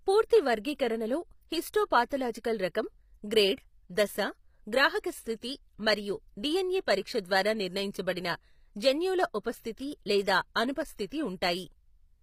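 Throughout this speech clip the treble sounds synthetic, with sibilants turning gritty and metallic and nothing above 15.5 kHz, likely HE-AAC compression: the upper band is rebuilt from copied lower harmonics rather than coded, consistent with a 24 kbps stream.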